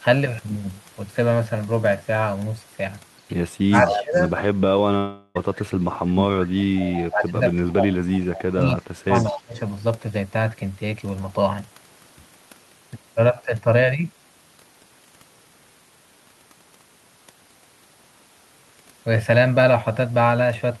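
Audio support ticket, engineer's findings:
Speech suppressed in double talk, 3.66–4.19 s, 4.67–6.73 s, 7.09–9.58 s. Level dips of about 20, 30 and 25 dB while the far side talks over. Likely the echo canceller's suppressor ducking local speech. Unlike a dropout, the speech is turned down, not lost in transit.

Echo leak, 3.75–4.03 s, 6.76–7.08 s, 8.34–8.43 s, 9.15–9.39 s. A copy of the speech trails it by 208 ms, at about 5, 15, 20 and 20 dB under the speech. Likely residual loudspeaker echo the far-end canceller missed. The fixed delay separates it from reverb.

Long network dropout, 4.97–5.37 s. About 380 ms of audio never arrives. Concealment fills roughly 377 ms with a fading buzz or hiss and leaves no silent gap, then the speech resumes with that part missing. Likely packet loss on the path. The synthetic fill and the skipped content distinguish it from suppression ducking.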